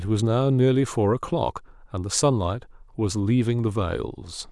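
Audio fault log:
Nothing stood out on listening to this speech recording.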